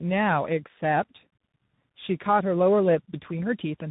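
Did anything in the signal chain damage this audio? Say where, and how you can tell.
Yes, at the codec stage: tandem speech coding throughout. Speech is rough, with nothing above 3.8 kHz. CVSD re-encodes G.729A output, compounding its losses.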